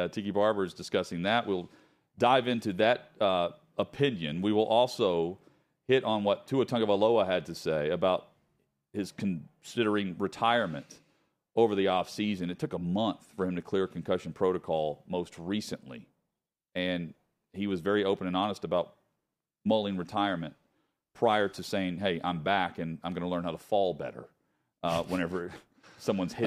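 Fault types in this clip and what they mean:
Nothing stood out on listening to this speech recording.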